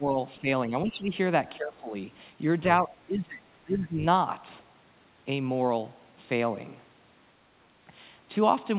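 The speech dips at 0.00–0.17, 0.41–0.46, 0.69–1.11, 1.57–1.93, 2.82–4.04 and 7.68–7.73 s, by up to about 20 dB. The likely cause is speech suppressed in double talk, where the echo canceller mistook the talker for loudspeaker echo. The audio is band-limited to 4 kHz by the G.711 call path.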